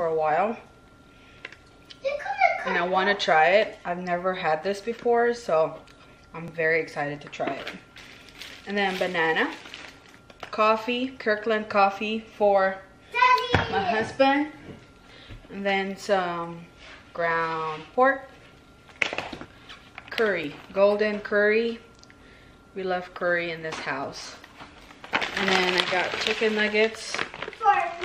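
At 6.48 to 6.50 s and again at 20.44 s, an overlap between stream segments removes about 20 ms of sound, so the waveform jumps forward in a tiny skip. Unlike a dropout, nothing goes silent. Material simply goes missing where mistimed segments, pointing to roughly 2-second segments, were trimmed.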